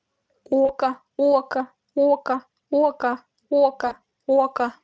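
A speech clip in which VoIP packet loss, concealed by the speech codec, occurs twice, from 0.65 to 0.72 s and from 3.87 to 3.95 s. Each gap fits about 40 ms of lost audio, or two frames, and the decoder fills it by extrapolating its last pitch and filter at falling gain. The speech smears into a brief buzzy tone or coloured noise that fades, then stays weak for a moment after packets resume. The Speex coding itself, at 34 kbps, adds little audible damage.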